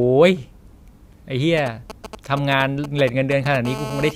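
From 1.58 to 3.56 s, GSM signalling bursts break into the speech. A 2G handset close to the recording chain is only exchanging control traffic, so it transmits in short clusters, and the audio circuitry demodulates each radio pulse into sound. The result is a galloping run of brief 217 Hz buzzes, roughly 10 dB below the speech. On a spectrogram these appear as short vertical stacks of harmonics spaced 217 Hz apart. The waveform shows matching clumps of sharp, regularly spaced spikes.

From 3.65 to 4.11 s the interference becomes a GSM phone buzz. The handset has moved into call mode and now bursts continuously at 216.7 Hz. Rectified the same way, this gives a hard, raspy, unbroken buzz about 11 dB under the speech and unrelated to it. A spectrogram shows a solid comb of horizontal lines at 217 Hz and its many multiples, reaching high into the spectrum. The waveform carries an evenly repeating pulse train riding on the speech throughout.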